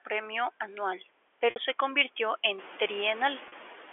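From the start there's a noise suppressor at work, pulling the steady background down by about 6 dB. You can hear it dip between phrases and swell back under the speech, and the room noise climbs around 2.5 s.

Then come two dropouts patched over with pitch repetition. At 1.50 to 1.56 s, just before "se convirtió", about 60 ms goes missing, which fits three 20 ms packets. The receiver loops the last pitch cycle and fades it into silence before the speech cross-fades back, and again at 3.48 to 3.52 s for about 40 ms, this time giving a brief buzzy hold.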